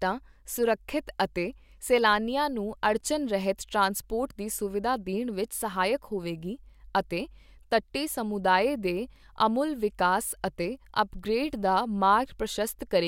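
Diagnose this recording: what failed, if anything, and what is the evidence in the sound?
The failure is at the storage and playback stage: CD scratch ticks. Four short clicks fall between 4.94 s and 5.73 s, after "ਰਹਿਤ ਟ੍ਰਾਂਸਪੋਰਟ ਦੀ ਸੁਵਿਧਾ" and before "ਹੋਵੇਗੀ ਅਤੇ ਤੱਟੀ ਸਮੁਦਾਏ". The longest lasts well under a millisecond. They repeat at about four per second, which matches one disc rotation. On each pass a surface blemish corrupts more data than error correction can repair, and the player interpolates or mutes the damaged samples, leaving a brief tick.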